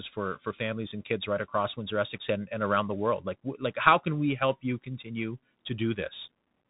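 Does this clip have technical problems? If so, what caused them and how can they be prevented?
Yes. The speech runs through a Bluetooth CVSD headset codec for its whole length, and the damage is plainly audible. Nothing gets through above about 3.8 kHz, so it sounds boxed-in and narrowband. CVSD sends just one up-or-down bit per sample and adapts its step size; when loud high content moves faster than the step can follow, it distorts. That's why s sounds come out scratchy over a granular hiss, which fits a 64 kbps link. To prevent it, record on a wired mic or a headset using a wideband Bluetooth profile.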